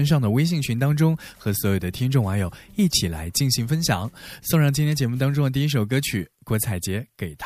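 At 4.92 s a sharp snap lands on top of the speech, lasting only about 4 ms and peaking around -20 dBFS. This is an electrical switching spike, likely from a nearby switch, motor or static discharge arcing briefly and being picked up by the audio line. On the waveform it shows as a narrow vertical spike standing apart from the speech envelope. On a spectrogram it appears as a thin full-height vertical stripe of broadband energy.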